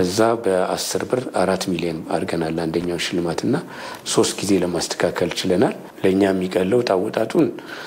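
A worn or dirty contact making and breaking from 2.80 to 3.00 s chops the signal, giving a short, irregular burst of loose connector crackle and scratching.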